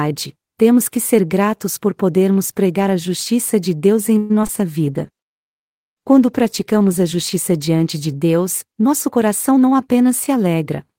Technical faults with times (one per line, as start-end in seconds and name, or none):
4.17-4.36 call audio freeze
4.41-4.50 short concealed packet loss
4.93-8.70 call bitrate drop
9.07-9.79 jitter buffer speed-up